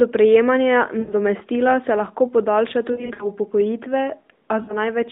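Speech over a narrowband AMR phone line, with lost AMR speech frames at 1.00–1.13 s, 2.92–3.28 s and 4.62–4.79 s. The decoder covers each gap by stretching the last good sound with falling level, so you hear short smeared warbles. The middle one stutters on and off across the stretch.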